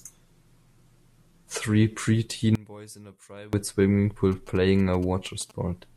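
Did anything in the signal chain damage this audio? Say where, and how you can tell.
Yes. From 2.55 to 3.53 s the speech falls about 24 dB to a faint residue, likely one channel inverted in the analogue wiring, cancelling when summed to mono.

From 4.32 to 5.52 s, faint galloping bursts of short 217 Hz buzzes sit well below the speech. These are GSM signalling bursts from a nearby phone, rectified in the analogue circuitry.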